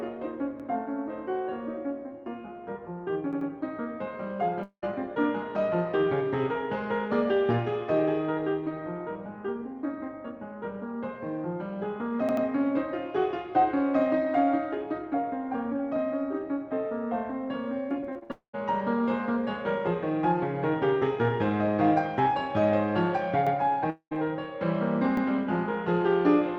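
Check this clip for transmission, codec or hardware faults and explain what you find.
The music carries three kinds of fault: repeated buffers, long network dropouts and a burst of repeated packet loss. Everything passes through an Opus call path whose content tops out around 8 kHz.

Repeated buffer at 0.60–0.68, 3.33–3.50, 12.29–12.46, 23.47–23.55 and 25.17–25.26 s. When fresh audio missed its deadline, the output replayed the previous block of about 85 ms, which fits a 4096-sample buffer. It played once more at 0.60, 23.47 and 25.17 s, and twice more at 3.33 and 12.29 s. Each instance is a quick stutter with hard joins. The waveform shows identical adjacent segments, and the spectrogram shows the same pattern copied with vertical seams.

Long network dropout at 4.63–4.84, 18.32–18.55 and 23.90–24.13 s. Each lasts about 200–220 ms, and the likely cause is a stretch where no audio arrived. 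The receiver stretches the last sound into a fading buzzy tail, then leaves about 80–110 ms of near-silence before the music resumes with that section missing. The spectrogram shows a smeared, decaying band followed by an empty gap, and the waveform shows a shrinking envelope that flattens out.

Repeated packet loss (robotic sound) from 17.89 to 18.32 s, running straight into the second dropout. Six separate holes, the longest 60 ms, were each patched by continuing the preceding sound. That concealment covers about a third of the span, roughly 140 ms of lost audio. The result sounds choppy, with pieces missing. The spectrogram shows repeated blurred, harmonically flat patches alternating with real content, and the waveform shows irregular chunks with abrupt envelope steps.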